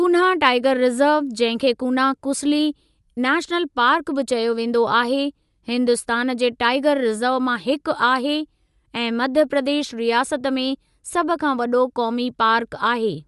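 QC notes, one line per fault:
throughout: Bluetooth LC3 compression. The speech has a breathy, grainy edge and nothing above 11.5 kHz, likely from LC3 coding at a rate around 48 kbps with 10 ms frames. A spectrogram shows a hard ceiling at 11.5 kHz and speckled, noise-filled patches in the upper band.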